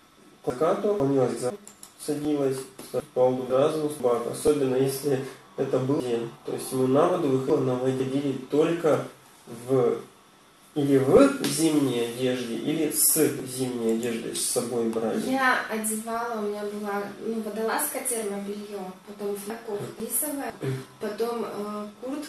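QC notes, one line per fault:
0.5–1.5 s, chunks out of order: a 500 ms chunk arrived one slot late and swapped places with its neighbour, leaving a jumbled second with three hard joins.
3.0–4.0 s, chunks out of order: another 500 ms chunk played one slot late, so two halves of this second run reversed, with a hard join at each splice.
6.0–8.0 s, chunks out of order: a 500 ms chunk played three chunks late, after the material it should precede, giving a longer garbled stretch with three hard seams.
19.5–20.5 s, chunks out of order: one 500 ms chunk arrived a slot late and swapped with the next, so the sound jumps back and forth with hard joins.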